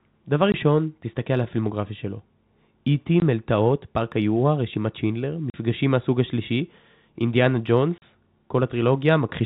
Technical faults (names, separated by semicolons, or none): packet loss filled with silence